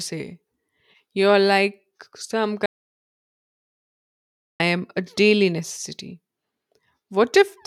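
At 2.66 s, just after "like some", the speech cuts off abruptly and the track falls to silence until 4.60 s, resuming mid-flow with "am a daily necessity". This is an audio dropout to silence, with roughly 1.94 s of speech simply gone. The likely cause is the input being lost while recording carried on writing silence. Unlike a noise gate, there is no fade and no room tone in the gap.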